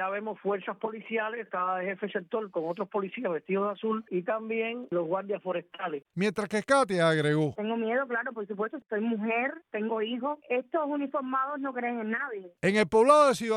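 No technical faults are audible.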